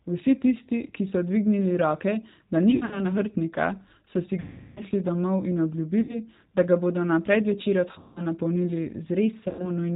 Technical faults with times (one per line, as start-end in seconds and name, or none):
0.00-9.96 G.729 codec
2.71-3.03 VoIP packet loss concealed by the speech codec
4.40-4.82 VoIP packet loss concealed by the speech codec
6.01-6.19 VoIP packet loss concealed by the speech codec
7.98-8.22 VoIP packet loss concealed by the speech codec
9.49-9.71 VoIP packet loss concealed by the speech codec